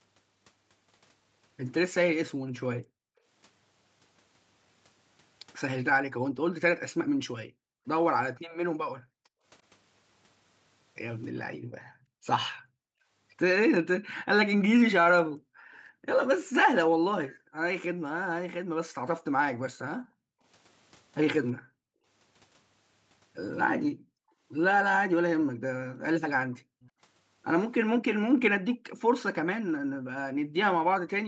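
Background gated by the echo canceller first appears from 2.39 to 3.25 s and returns from 6.01 to 9.44 s, from 11.56 to 13.08 s, from 15.23 to 22.07 s, and from 23.9 s to the end. Each time the far-end loudspeaker is active, the canceller pulls the microphone down by about 40 dB at its deepest, so the room tone falls away in short holes adding up to roughly 0.7 s, 1.5 s, 1 s and 3 s in the first four stretches, then swells back once the canceller releases.

Echo leak is heard from 14.16 to 15.77 s, from 25.42 to 26.90 s and briefly from 28.70 to 28.77 s. A faint copy of the speech trails it by 340 ms, about 25 dB below the main level in the first two stretches and about 30 dB below in the last blip. It is likely residual loudspeaker pickup that the canceller failed to subtract and sent back down the call. Both faults sit within the Opus call path's top end of 8 kHz.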